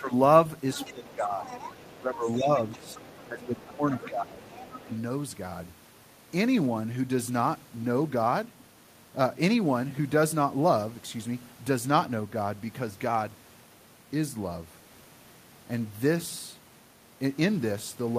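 Speech suppressed in double talk dips the speech at 0.00–0.12 s, 0.90–1.46 s, 1.86–4.42 s and 4.84–4.90 s, by roughly 10 to 15 dB. The likely cause is an echo canceller ducking both talkers at once. The other side's voice leaking through appears faintly at 0.73–1.14 s, 1.46–1.96 s, 2.32–4.08 s and 4.43–4.98 s, about 15 to 20 dB below the speech, likely loudspeaker echo left in by the canceller.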